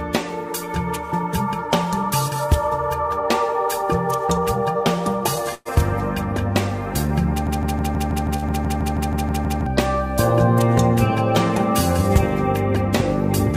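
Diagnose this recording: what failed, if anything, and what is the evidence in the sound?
Network stage: a call audio freeze at 5.54 to 5.68 s. The sound carries on as a fading fill for about 110 ms, with a brief dropout, and nothing is skipped. The likely cause is delayed packets draining the jitter buffer.

Playback or stream stage: a broken-record loop from 7.47 to 9.67 s. A 160 ms fragment repeats back to back 13 times, and the audio that should have played there is lost. A stalled player, encoder or stream is the likely cause.

Network stage again: a short stall from a late packet at 8.37 to 8.45 s. The last sound is stretched for 56 ms until the packet arrives, then resumes with nothing missing.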